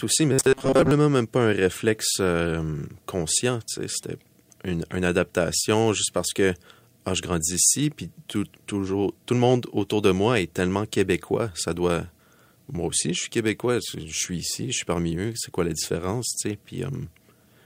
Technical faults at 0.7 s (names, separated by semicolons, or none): robotic sound from repeated short buffers